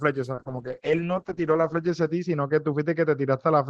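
From 0.35 s to the end, a call bitrate drop starves the encoder, from 32 to 7 kbps, bottoming out for 1.05 s. Coarser coding makes the speech rough and watery, and bandwidth narrows from 20 kHz to 8 kHz, so a spectrogram shows everything above 8 kHz cut away.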